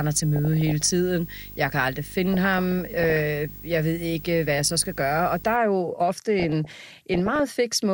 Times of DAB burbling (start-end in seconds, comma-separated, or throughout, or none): 0.36-0.82, 2.23-3.22, 6.40-7.40